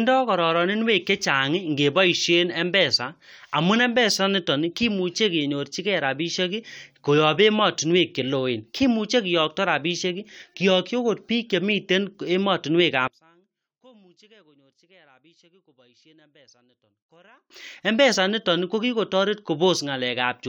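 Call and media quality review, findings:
Speech level collapses by about 33 dB from 13.08 s to 17.50 s, leaving a faint residue. Likely cause: one channel inverted, so identical left and right content cancels in the mono sum. Unlike a dropout or mute, the path stays live: a faint difference signal persists, and full level snaps back at 17.50 s.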